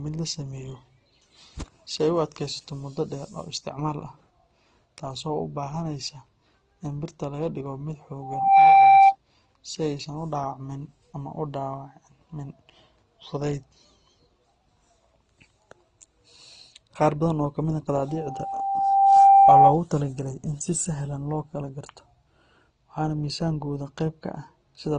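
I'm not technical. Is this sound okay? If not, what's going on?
No. There are two problems.

Loudspeaker feedback squeal, from 8.22 to 9.16 s and again from 18.08 to 19.81 s. A steady whistle at 785 Hz swells up over the speech, taking a little under half a second to build the first time and about a second the second time, and it ends up much louder than the voice. It happens when a microphone picks up the loudspeaker it is feeding. One pitch keeps going around that loop, getting stronger each time, until it takes over.

Transcoding between lossy codecs, throughout the clip. The speech sounds dull, with nothing above 10 kHz. This is most likely because the audio was squeezed by one compression format, probably AAC, and then squeezed again by Opus. The second format wastes effort reproducing the first one's flaws and adds its own, so both sets of damage are heard together.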